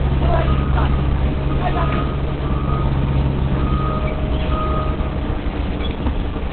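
From start to end, the audio is muffled and hoarse. Nothing reaches above 4.3 kHz. This points to heavy Opus compression as the likely cause. The narrow band and rough texture fit its speech mode at a low bitrate, around 12 kbps.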